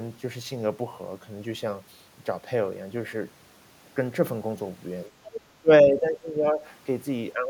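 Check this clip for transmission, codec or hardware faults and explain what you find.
Two kinds of fault turn up in this speech clip, both near its end and both pointing to an echo canceller struggling on a speakerphone-style call.

Other side's voice leaking through, 5.32 to 5.41 s: a brief scrap of a second voice slips in underneath, sitting roughly 10 dB below the main talker. This is likely residual echo. The far end's audio played from the talker's loudspeaker reached the microphone, and the echo canceller failed to subtract all of it, so a clipped fragment survives into the outgoing signal.

Speech suppressed in double talk, 5.61 to 6.65 s and again from 7.34 s to the end of the clip: the talker's voice sinks noticeably, dropping by as much as around 15 dB in the first stretch, which lasts about a second. The second stretch is shorter and dips by about 10 dB. Both sides were likely talking at once here, so the canceller probably could not tell the near talker from the loudspeaker echo and pulled the whole signal down.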